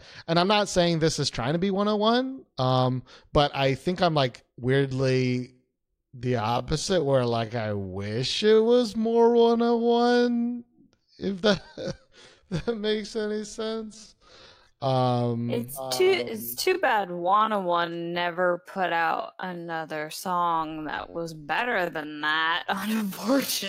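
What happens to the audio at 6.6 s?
At 6.6 s the speech is inside a time-stretched section that begins at 4.74 s, right after "I think I'm like", and runs to the end. Playback is slowed to about 0.6 times normal pace with the pitch unchanged, likely from software repeating short slices to lengthen the audio. It sounds dragging. On a spectrogram, harmonics keep their height but syllables stretch wider, and the waveform shows repeated, near-identical cycles blurring onsets.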